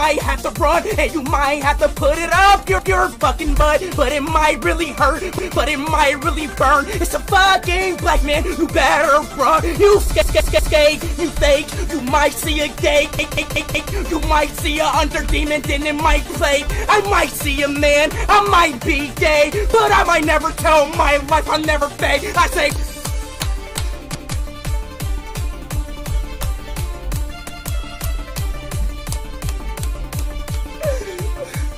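Repeated buffer faults at 2.79, 5.39, 10.22, 13.19, 24.15 and 27.49 s: new audio failed to arrive in time, so playback looped the last block, about 186 ms long, which fits an 8192-sample buffer. Each repeat makes the same piece of sound play again with a hard join. It replays once at most points, but three extra times from 10.22 to 10.77 s and four extra times from 13.19 to 13.93 s, giving a short stutter.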